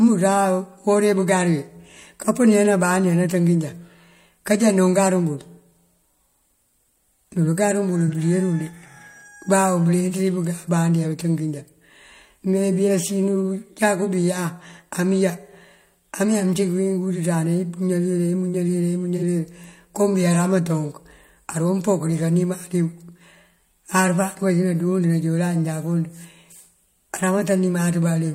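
AAC frame loss with concealment occurs twice, at 8.07–8.13 s just before "bëdirul de" and at 19.17–19.23 s. Each time the decoder patched the gap from the last good spectrum. The roughly 43 ms that fits one lost frame comes out briefly smeared and noisy.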